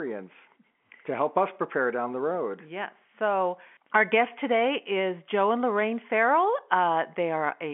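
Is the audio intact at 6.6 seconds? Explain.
Yes, the speech at 6.6 seconds is intact, with only the narrow telephone band of G.711 coding audible and nothing above about 3.8 kHz.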